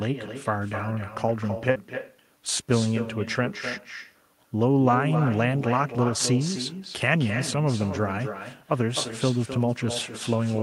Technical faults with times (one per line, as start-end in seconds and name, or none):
0.00-10.62 echo with no canceller
1.71-1.77 short concealed packet loss